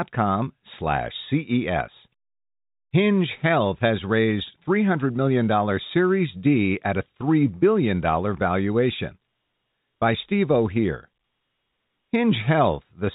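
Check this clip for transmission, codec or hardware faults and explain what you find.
Nothing here points to a transmission, codec or hardware problem: the speech comes across steady and intact over what sounds like an ordinary telephone-band line.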